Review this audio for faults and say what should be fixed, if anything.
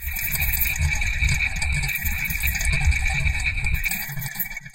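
Word clock ticks run through the sounds from 0.31 s to 4.25 s. About five sharp ticks land roughly once a second, and their strength varies. The receiving device is running on its own clock, not locked to the source. The two clocks differ by something like 20 parts per million. Each time they slip past each other, a single sample is dropped or repeated, producing a tick. To fix and prevent this, lock the receiver to the sender's word clock or a shared master clock.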